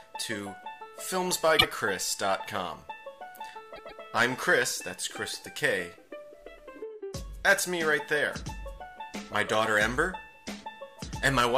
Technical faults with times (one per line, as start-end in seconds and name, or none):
1.58-1.66 repeated frames
3.75-4.01 repeated frames